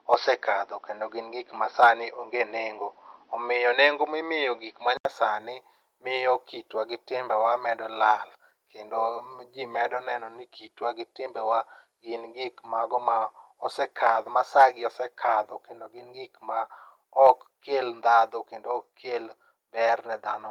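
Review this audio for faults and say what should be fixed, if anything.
The first 5.05 s sound dull and boxy, likely because the input switched to a poorer device, with a faint new noise floor about 45 dB down. At 5.05 s an 80 ms gap precedes clearer, full-band sound. On a spectrogram, the top band is empty until the gap. Lock the input device before recording starts.

Microphone overload at 1.83–1.87 s, 14.60–14.63 s and 17.26–17.30 s adds a brief harsh crackle as peaks go about 1 to 2 dB past the converter's limit, likely from input gain set too high. A small share of samples is affected. The waveform shows flat-topped peaks, and the spectrogram shows a vertical smear of high-frequency energy at each spot. Reduce input gain to leave headroom.

Microphone volume stepped down at 14.61 s, by about 2 dB, right inside an overload, and again at 17.88 s, by about 3 dB, shortly after the third. 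Both voice and background drop together, likely from the call software reacting to the distortion. The waveform envelope steps lower and stays there. Disable automatic gain adjustment and set a fixed level.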